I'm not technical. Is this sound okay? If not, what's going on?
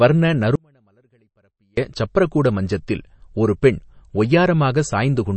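No. Two things are wrong. The speech was likely squeezed through MP3 compression at a low quality setting. To save space, the encoder throws away parts of the sound it judges less important and removes everything above about 8.3 kHz. The result runs through the whole clip: the voice sounds dull and muffled at the top, with a watery, swirling quality and clearly audible damage, especially on hissy sounds like s.

There is also an audio dropout to a faint residue from 0.55 s to 1.77 s. For about 1.2 seconds the signal itself was lost, most likely through a break somewhere in the recording or transmission chain, while the equipment after the break kept running. During that gap only a faint trace of sound remains, far below the normal level. The speech cuts out abruptly rather than pausing or fading, then returns just before "சப்ரகூட மஞ்சத்தில் ஒரு பெண்".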